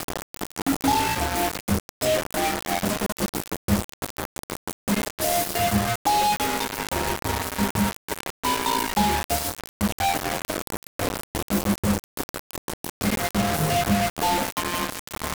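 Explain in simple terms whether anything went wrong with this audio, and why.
Something did go wrong, and it affects the whole clip from start to finish. The sound is grainy and harsh, with a rough distortion that changes shape as the sound changes. Quiet moments break up into a sputtering buzz or drop out entirely. This is low bit depth without dither. The audio was likely stored with only 3 bits, so every sample was rounded to one of just a handful of levels with no added noise to smooth the steps.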